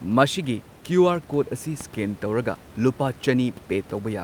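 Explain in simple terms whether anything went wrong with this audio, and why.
Nothing went wrong; only ordinary room noise is audible.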